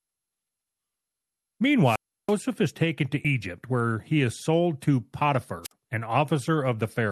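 From 1.84 to 2.34 s, hiss swells, then about 330 ms of near silence, and the speech returns with "is taken to". This is a wireless microphone squelch dropout: the analogue radio signal faded until the receiver's squelch muted the output. At 3.24 s, between "is taken to" and "where he is sold", the speech jumps ahead, and around 50 ms of it is missing. That is compressed frames skipped: a jump of that size fits two lost frames of 26.1 ms. A shorter squelch dropout follows from 5.63 to 5.72 s, muting about 51 ms.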